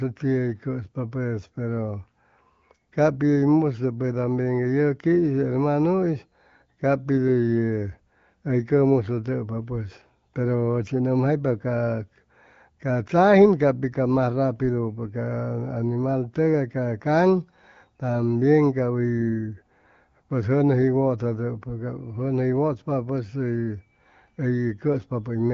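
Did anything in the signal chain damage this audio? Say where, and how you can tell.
No, nothing in the signal chain damaged this audio; the speech passes through an AMR wideband (HD Voice) codec at a rate that fits about 15.85 kbit/s, where it stays clear.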